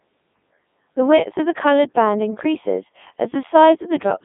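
From start to end, the speech has passed through a Codec 2 vocoder. The heavy damage fits its top rate of about 3.2 kbit/s. The codec keeps only pitch, voicing, loudness and a rough spectral shape. The decoder rebuilds the voice from sine waves, so the original waveform is gone. The result sounds robotic and buzzy. The band runs from 150 Hz to 3.6 kHz, and nothing is heard above about 3.8 kHz.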